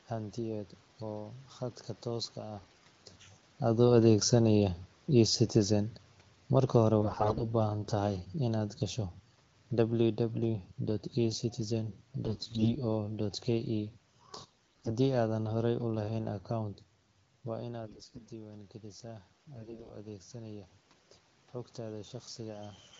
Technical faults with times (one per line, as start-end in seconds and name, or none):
2.57-2.88 AMR bit errors
6.73-8.73 automatic gain falling
7.01-7.54 AMR bit errors
12.25-12.74 AMR bit errors
14.46-14.89 AMR bit errors
17.57-20.75 automatic gain rising
17.84-18.30 AMR bit errors
19.56-19.96 AMR bit errors